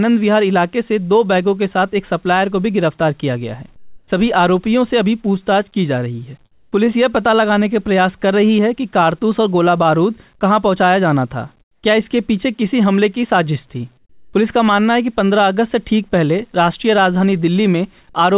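Comfort noise replaces the background at 3.76 to 4.08 s, 6.52 to 6.72 s, 11.61 to 11.83 s and 13.97 to 14.33 s. The pauses likely went untransmitted, so the receiver filled them with synthetic noise. The real background, about 40 dB under the loudest speech, becomes flat and featureless. Each patch is quieter, by about 4, 6, 14 and 7 dB.

At 14.28 s the next onset is clipped by the voice detector. It was likely slow to react, so the first 50 ms went missing. The speech starts abruptly, without its soft lead-in, out of the comfort noise. The call codec cuts off everything above 4 kHz throughout.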